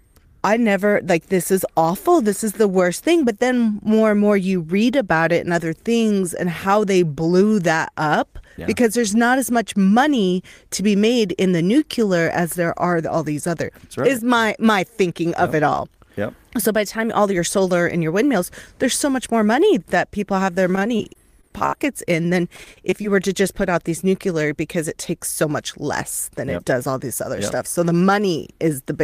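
Repeated packet loss hits the speech twice, right after "that people have their" from 20.75 to 21.74 s and again after "in than" from 22.56 to 23.16 s. Packets kept failing to arrive, and each hole was bridged by stretching the preceding sound, with the longest gap near 64 ms in the first burst. About a fifth of each stretch is patched, so the voice turns choppy and robotic, with brief pieces missing before "to just put out".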